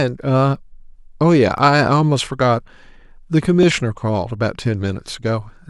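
Periodic USB or driver dropouts recur about every 1.02 s from 0.56 to 4.65 s; roughly a millisecond of speech is skipped each time, leaving regular ticks.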